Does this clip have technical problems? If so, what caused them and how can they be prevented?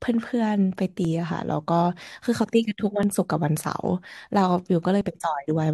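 Yes. There is an overlap between stream segments. The speech arrives in 2-second segments whose time stamps overlap slightly, so the player discards the overlapping span as if it were duplicated, even though that audio existed only once. A few milliseconds of real sound are removed at each joint, and the waveform jumps across the gap. This is heard as brief clicks or skips at 1.05, 3.03 and 5.01 s. To prevent it, derive each segment's time stamp from the exact sample count so every segment begins precisely where the previous one ended.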